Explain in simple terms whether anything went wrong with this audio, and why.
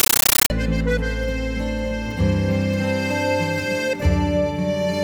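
From 0.0 to 0.5 s, a compressed stream is played as audio: undecoded Dolby Digital data comes out as loud static, chattering 31 times a second, unlike steady hiss.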